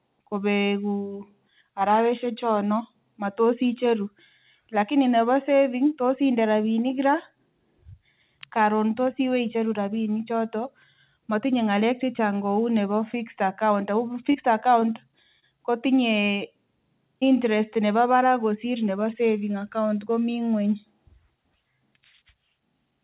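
At 14.32 to 14.36 s and again at 14.80 to 14.84 s, speech packets failed to reach the decoder in time. Each is a short concealed packet loss: about 20 ms of real audio is gone, and the receiver papers over the hole by continuing the preceding sound and then blending back into the signal, heard as a brief smear or wobble.

At 15.40 to 15.44 s a late packet let the jitter buffer run dry, causing a short stall. The receiver holds the last sound for about 29 ms until the packet turns up, then resumes where it left off. Nothing is lost, but the sound lingers a touch too long, with a faint buzz or dip.

A further concealed packet loss at 17.20 to 17.24 s again drops about 20 ms, bridged briefly by extending the previous sound.

All of this rides on a narrowband call path with nothing above 4 kHz, which fits G.711 telephone coding.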